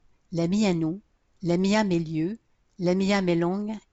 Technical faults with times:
none

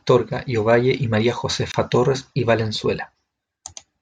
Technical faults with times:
1.72-1.74 gap at a join of encoded pieces

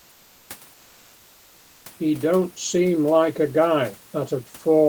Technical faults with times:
0.00-0.49 comfort noise in place of the background

